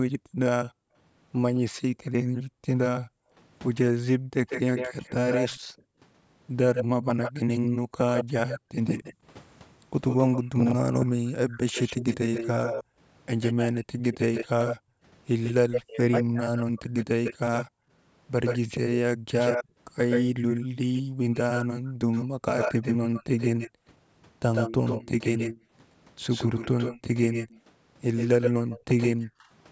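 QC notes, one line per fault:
0.18–4.31 s, 12.84–12.98 s and 17.67–25.72 s, background gated by the echo canceller: while the far end was playing out of the loudspeaker, the room sound behind the talker drops away and then comes back once the canceller releases. The dips reach about 40 dB in the first and third spans and about 26 dB in the short one at 12.84 s. Together they add up to roughly a second, a brief moment, and under a second. Only the ambience goes, which is what separates this from double-talk suppression.
1.7–20.84 s and 27.02–29.5 s, speech suppressed in double talk: the talker's own voice dips, thins or breaks into pieces, losing up to about 40 dB in the first span and about 25 dB in the second. This adds up to around two seconds and a fraction of a second respectively. The likely cause is the canceller hearing both sides at once and turning everything down because it cannot separate the local voice from the loudspeaker echo. 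Unlike background gating, the voice itself is what gets chopped.
4.47–29.26 s, echo leak: a delayed copy of the voice trails the original by 148 ms at only about 5 dB below it, a second, slightly later copy rather than room reverberation. The likely cause is a speakerphone whose canceller let part of its microphone pickup through, which was then sent back down the call. The fixed delay and the separate, distinct copy mark it as an echo. A suppression fault would instead show up as a loss of sound.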